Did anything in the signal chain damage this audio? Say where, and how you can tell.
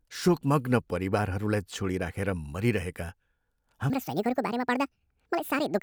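Yes. From 3.9 s to the end, the speech suddenly turns high-pitched and hurried, running about 1.66 times too fast and rising roughly ten semitones. That section was likely resampled or played against the wrong clock at the editing or playback stage, so it plays at the wrong speed.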